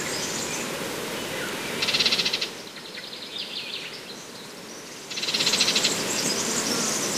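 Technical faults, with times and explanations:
No technical faults are present.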